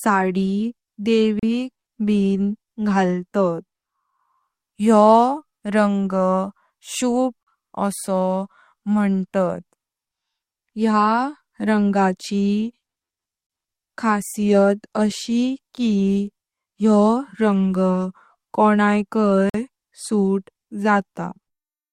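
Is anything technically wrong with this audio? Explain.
Yes, there is a gap between stream segments at 1.39 s, 7.43 s and 19.50 s, lasting about 35, 39 and 48 ms. The segment timestamps don't quite meet, so the player inserts silence. You hear hard-edged dropouts on boundaries spaced in 6-second steps, with nothing removed from the speech.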